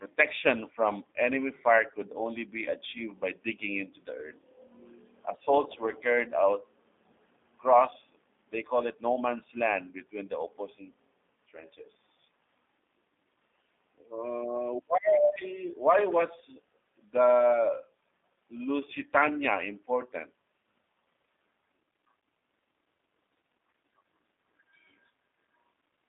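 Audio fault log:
throughout, G.729 codec: the speech is confined to a telephone band of roughly 250 Hz to 3.6 kHz, with nothing above 3.7 kHz. The coder discards the waveform and resynthesises each short frame from a spectral envelope filter, a pitch estimate and a sparse pulse excitation. That leaves plainly audible roughness, a buzzy synthetic edge and dulled consonants. The strength of the damage fits an 8 kbit/s G.729A link.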